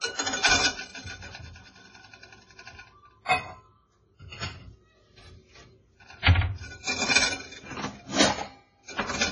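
The sounds were likely passed through transcoding between lossy codecs, a low-rate MP3 encode re-encoded as Vorbis at a similarly low rate. Throughout, the second codec wastes bits on the first one's smearing and adds its own swirl, and nothing remains above 10.3 kHz.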